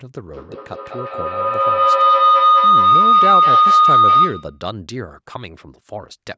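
A speech recording with a feedback howl from 0.33 s to 4.67 s. A loudspeaker and a microphone in the same room are on the same call, and each trip around that loop adds level. The repeats grow instead of dying away and narrow to a tone near 1.5 kHz. They come roughly a fifth of a second apart, the loop's delay, and the howl peaks about 13 dB above the speech before it stops. The call's bandwidth tops out at 8 kHz.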